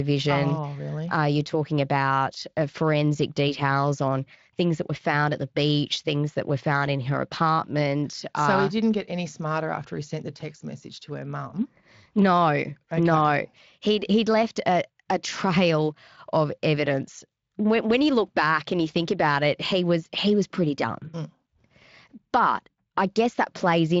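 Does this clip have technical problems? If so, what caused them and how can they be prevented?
No, there are no technical problems in this speech.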